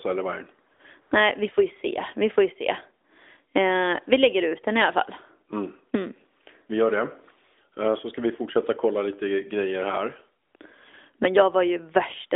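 AMR comfort noise shows up four times in this phone-band speech, which sounds lightly coded, consistent with AMR-NB at its top rate. The phone decided nobody was talking, stopped sending speech frames, and the receiver patched in synthetic hiss. You get brief smooth, steady fill at 0.74 to 0.80 s and 1.02 to 1.12 s, then just after "kolla lite grejer här" at 10.46 to 10.54 s and 10.56 to 10.60 s, where the real background drops out.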